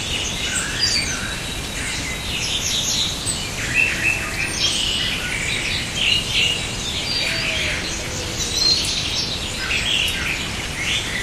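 A recording of sounds, and nothing in it stands out as a technical fault, so there's nothing to pin to a time or a cause here.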